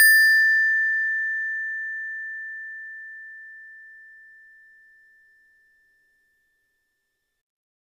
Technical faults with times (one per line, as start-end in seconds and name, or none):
none